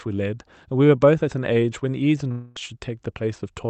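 At 2.31 s the stream of packets most likely stopped arriving, a long network dropout lasting until 2.58 s. About a quarter of a second of the speech never reached the receiver, so the decoder smeared the last sound it had into a fading fill that covers the whole gap without dropping to silence. The speech then resumes mid-flow with that stretch simply gone, heard through the call codec's band limit at 8 kHz.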